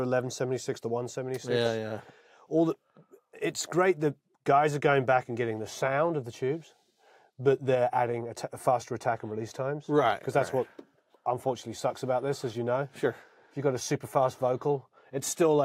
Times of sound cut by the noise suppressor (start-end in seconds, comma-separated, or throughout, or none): none